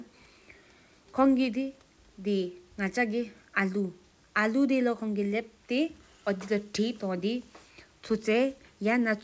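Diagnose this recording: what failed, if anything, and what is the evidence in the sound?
Nothing failed in this recording, and the sound carries no evidence of any fault.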